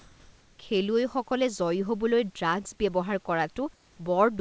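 Comfort noise in place of the background appears from 0.00 to 0.59 s and again from 3.74 to 3.98 s. In both gaps the real room background, which sits about 34 dB below the loud parts, gives way to a smooth, featureless hiss, likely because the sender stopped transmitting during pauses and the receiver synthesised filler noise. The first patch shifts the background level by about 4 dB; the second matches it. Like the rest of the audio, neither patch has anything above 8 kHz.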